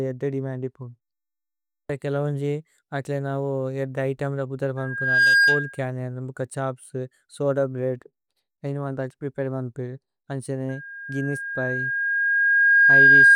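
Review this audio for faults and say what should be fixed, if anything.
Loudspeaker feedback squeal shows up twice, a 1.6 kHz tone howling over the speech. It first swells in about half a second between "അകിലേന ഏദ്ദ ഇതേമ്ല ബുദര്" and "ബുക്ക ഛോപ്സ് സോദ ബ്രേഅദ്", from 4.77 to 5.81 s, roughly 10 dB above the speech. It returns at 10.69 s and builds for around two seconds to about 15 dB above, lasting to the end. The mic is hearing its own speaker, and loop gain tops one at that frequency. Next time, pull the mic back from the speaker or notch 1.6 kHz.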